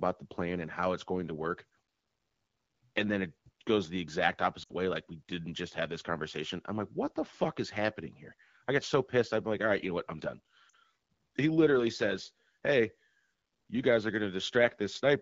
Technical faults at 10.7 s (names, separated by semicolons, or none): lost AMR speech frames